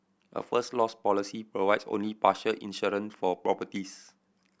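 No technical faults can be heard anywhere in the speech. There is no moment in the recording that needs a timestamp.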